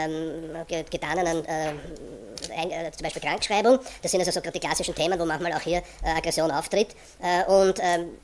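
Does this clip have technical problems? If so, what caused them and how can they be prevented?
Yes, the whole clip has a wrong sample rate fault: everything runs 1.5 times too fast and sits about 7 semitones high, which fits 16 kHz material being played back at 24 kHz with no conversion, so speed and pitch rise together. To prevent it, check that playback uses the rate stored with the file, or resample properly before output.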